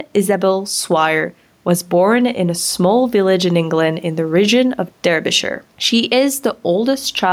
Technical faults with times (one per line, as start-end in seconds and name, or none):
0.00-7.32 gain pumping